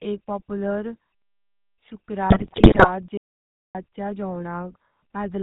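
Throughout, the speech has the buzzy, gravelly texture of the GSM full-rate codec, with nothing audible above 4 kHz. The coder models the vocal tract and drives it with a coarse, regularly spaced pulse excitation, which gives the rasp. That rasp is what separates it from plain band-limiting, which would sound muffled but smooth. The damage is plainly audible, and the character fits the 13 kbps full-rate coder.

From 2.3 to 2.89 s, GSM bit errors break the sound into squawks, pops and gargling. Corrupted bits reached the decoder, bending the filter, pitch and gain values so that individual 20 ms frames swell or distort wildly. The error density suggests a badly degraded radio link, with roughly a couple of dozen frames hit. Unlike packet loss concealment, which repeats or fades the sound, these errors produce new, harsh noises.

From 3.17 to 3.75 s, there is an audio dropout to silence. 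For about 0.57 s the signal falls to silence and then resumes mid-flow, and whatever was said in that gap is lost. The cause was likely a lost input, with the recorder writing silence in the meantime. No room tone remains in the gap, and that distinguishes it from a natural pause or a noise gate, which leave a faint floor or fade the sound out gradually.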